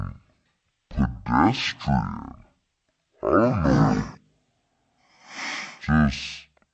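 From start to finish the speech runs at half speed and sits a full octave low, a wrong sample rate fault that fits playback near 22 kHz for audio recorded near 44.1 kHz. Unlike a pitch shift or time stretch, tempo and pitch fall together, with no warbling or smearing.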